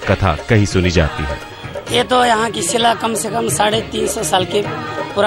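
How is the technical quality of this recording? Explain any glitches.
No glitches can be heard anywhere in the recording. There is nothing here that calls for an explanation.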